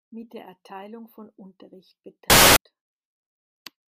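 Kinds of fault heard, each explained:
Samples built from the wrong bytes: from 2.3 to 2.56 s the bytes of each sample are assembled misaligned, so the jittery low bits dominate and the speech turns into loud hiss. A waveform shows a dense block of noise; a spectrogram shows flat broadband energy.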